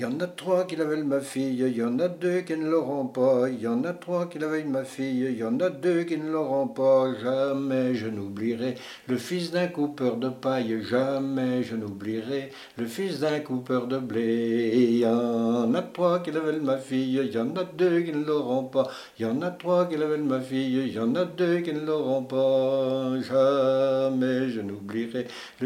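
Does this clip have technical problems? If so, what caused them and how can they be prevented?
No, nothing here sounds off, so there's nothing to fix or guard against this time.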